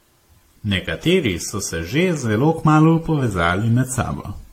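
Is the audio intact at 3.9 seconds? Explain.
No. At 3.9 seconds the speech carries generation loss, as it does throughout. It sounds swirly, hollow and smeared, with blurred attacks and nothing above 16.6 kHz. The likely cause is repeated lossy re-encoding, roughly seven passes, which points to AAC around 64 kbit/s.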